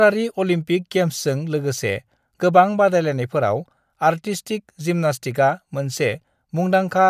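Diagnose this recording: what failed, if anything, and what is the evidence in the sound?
Nothing in the recording points to a failure at any stage of the chain, and the speech signal stays continuous and stable throughout, with no audible technical defect.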